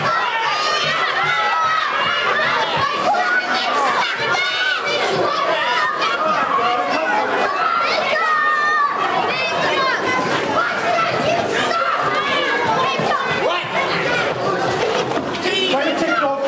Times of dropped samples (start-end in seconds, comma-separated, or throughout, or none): none